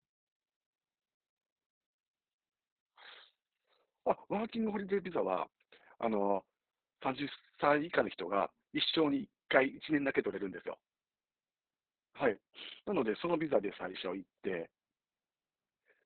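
Opus voice compression runs throughout the speech. The audio points to a very low bitrate, around 6 kbps, in SILK narrowband mode: nothing remains above 4.4 kHz, and the coarsely coded excitation leaves the speech muffled, hoarse and slightly robotic.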